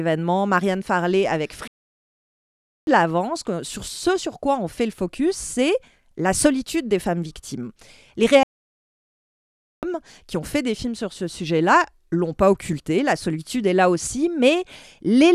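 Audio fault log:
1.68–2.87 s and 8.43–9.83 s: playback stall. The speech halts mid-flow and falls silent for 1.2 s, then 1.4 s. It picks up again at "de l'avant sur ce" and "qui ont fait des". The player likely ran short of data, so output stopped until it recovered.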